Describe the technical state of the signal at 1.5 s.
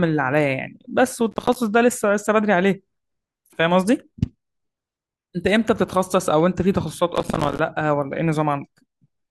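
Processor overload crackle from 1.32 to 1.56 s: dozens of roughly 5 ms buffers miss their deadlines, each leaving a hard-edged silent gap, so the speech sounds gritty and torn rather than cut by one clean dropout.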